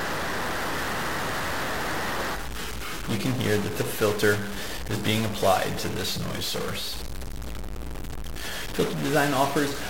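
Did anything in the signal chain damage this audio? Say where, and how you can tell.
Yes. A stuck bit runs through the whole clip, from start to finish, and the damage most likely happened at the converter or on a broken data line feeding it. One bit of each sample is held fixed at 0 or 1, so roughly half the values are wrong by that bit's weight, a step of around -30 dBFS. The error follows the waveform and flips with the sign of small values, so distortion rides on the sound and the pauses fill with noise instead of falling silent.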